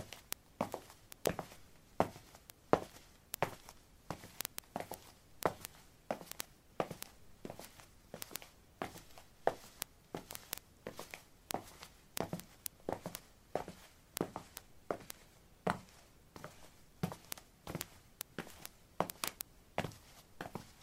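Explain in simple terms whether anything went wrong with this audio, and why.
From 0.10 s to the end, a steady stream of sharp ticks, roughly 25 a second, runs under the sound. These are word clock ticks: two linked devices keep slightly different time, so a sample gets dropped or repeated. Unlike random clicks, these arrive evenly spaced.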